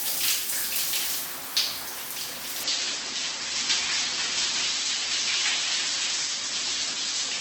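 At 2.63 s the audio switches abruptly to an adaptive stream at a lower bitrate and stays there to the end. Nothing remains above 8.1 kHz, and swirly codec artefacts appear, consistent with a drop from roughly 64 to 12 kbit/s. Unlike a dropout, there is no gap.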